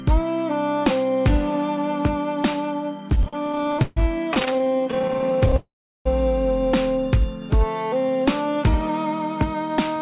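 From 3.1 to 3.98 s there are repeated stalls (stutter): packets arrived late, the jitter buffer kept draining, and the receiver stretched the last sound to fill about 37% of that span, with the longest hold at 141 ms. The audio drags and hiccups without losing content. A second run, from 4.34 to 5.54 s, consists of many very short stalls of 15 ms or less, filling about 26% of the span and producing a rapid fluttering stutter.

At 5.56 s a call audio freeze begins and lasts 0.49 s, likely caused by packets held up in transit. The final sound fades into roughly 0.37 s of silence, and playback resumes where it stopped, adding delay rather than dropping audio.

From 8.01 to 9.97 s a jitter buffer speed-up plays the sound at 106% speed with unchanged pitch. The receiver trims about a tenth of a second of pitch-period slices to shed accumulated delay, so the passage sounds slightly hurried. The narrow band, with nothing above 4 kHz, fits a G.711 call path.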